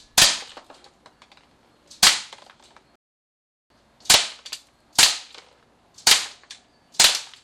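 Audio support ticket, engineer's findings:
Playback stall, 2.96 s to 3.70 s. Output drops to silence for about 0.75 s mid-flow, then sound returns. Likely cause: player buffer underrun or blocked audio thread starving the output device until data delivery recovered.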